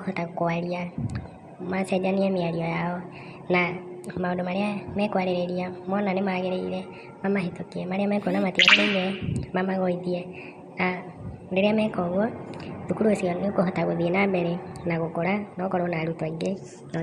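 From start to end the speech runs fast and high, the signature of a wrong sample rate. Everything plays 1.38 times too quickly and about 5.55 semitones sharp, which fits audio recorded at 32 kHz being played at 44.1 kHz without conversion.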